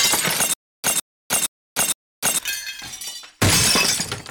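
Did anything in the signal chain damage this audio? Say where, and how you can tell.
Yes: a stutter with silent gaps from 0.54 to 2.39 s. A 159 ms burst repeats four times, each followed by 303 ms of digital silence, on a steady 462 ms cycle. The likely cause is a playback or stream stall replaying its last fragment on each retry, losing the audio in between.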